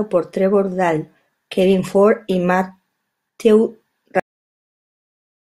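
At 4.20 s the speech stops dead in mid-sound: a cut-off end. The last stretch of audio was never written out, so the signal jumps straight to digital silence for the remaining 1.36 s, with no decay or room tail behind it. What separates this from a speaker simply finishing, or from a fade-out, is that abruptness. The final sound is severed partway through instead of tapering, and the silence after it is completely empty.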